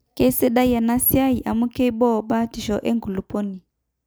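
Speech recording with no audible technical faults anywhere in the clip.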